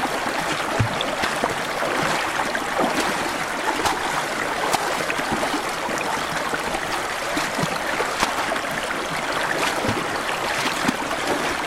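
Nothing goes wrong at any point in these everyday sounds; there's no fault to point to anywhere along the way.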